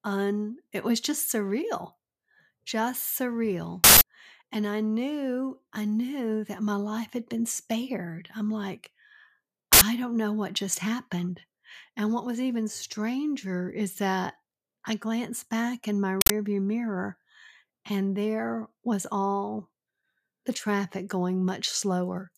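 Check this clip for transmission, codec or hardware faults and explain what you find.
The speech carries three bursts from an uninitialised buffer: at 3.84–4.01 s, 9.73–9.81 s and 16.21–16.30 s. The first lasts about 0.17 s, which fits an 8192-sample block; the others last about 0.085 s, fitting 4096-sample blocks. Each time, a block was sent to playback before audio was written into it, so stale memory contents played as samples. The result is a sudden burst of digital noise. On a waveform it appears as a rectangular slab with sharp edges, and on a spectrogram as a bright vertical band spanning the whole frequency range.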